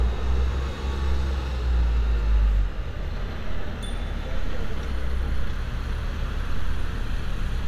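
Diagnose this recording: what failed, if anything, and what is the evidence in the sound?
Listening closely, nothing in the audio stood out as a failure at any stage.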